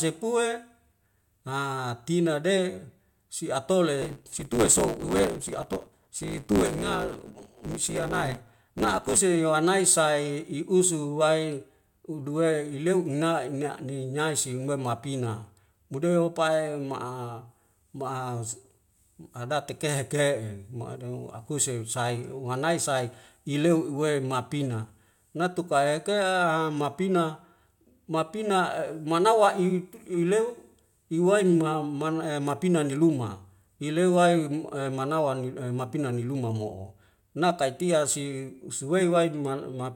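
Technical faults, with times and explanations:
4.01 to 9.18 s: block size mismatch (truncated). Block tails are dropped, causing a 109 Hz buzz. Speech runs 1.16 times fast at normal pitch, which fits 512-sample blocks.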